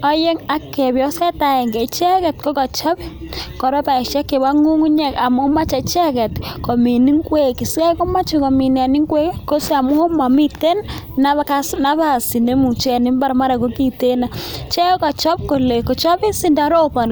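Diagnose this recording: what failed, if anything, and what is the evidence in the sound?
Nothing in the signal chain points to a failure: the speech arrives intact, with no disturbance attributable to wiring, conversion, buffering, processing, transmission, storage or playback.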